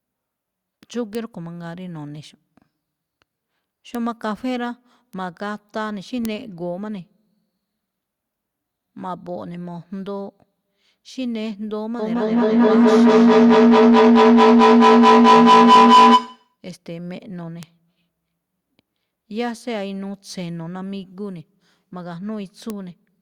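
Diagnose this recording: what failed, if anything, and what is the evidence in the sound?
Feedback howl in the acoustic call loop, 11.99 to 16.61 s: a tone near 1 kHz, pulsing about every 200 ms, climbs to about 16 dB above the speech.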